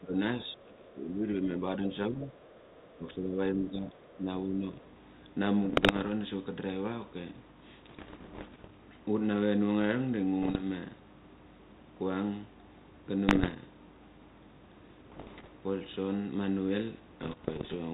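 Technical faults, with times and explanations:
0.0 to 4.64 s, speech suppressed in double talk: speech dips by up to about 15 dB in four stretches, likely from an echo canceller ducking both sides; level gaps, not crackle.
5.64 to 17.75 s, bit errors on an ADPCM link: six rough bursts of pops at 5.64, 7.88, 10.42, 13.28, 15.1 and 17.23 s, corrupted bits upsetting the decoder's step size; brief ringing, unlike clean dropouts.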